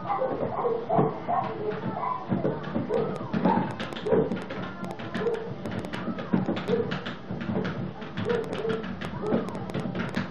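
From 2.94 s to 10.16 s a train of clicks runs over the sound, roughly forty near-identical pulses at about 4.9 per second but with uneven spacing between them. Each click stands around 10 dB above the surrounding audio, so it reads as a sharp tick or pop that is heard in quiet gaps too. The repeated pulse shape and sustained run point to a likely cause in electrical interference from nearby equipment or a faulty connection or power supply.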